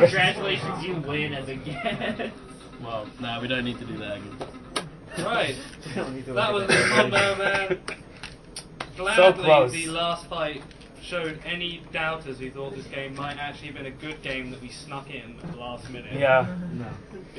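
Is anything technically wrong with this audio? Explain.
No, nothing technically wrong can be heard here.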